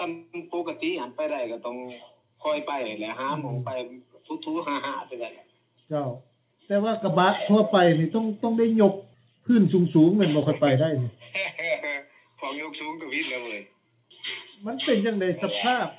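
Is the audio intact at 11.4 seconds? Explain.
Yes, the audio at 11.4 seconds is intact, carrying only the narrowband sound of the call path, with nothing above about 4 kHz, as expected of G.711 mu-law.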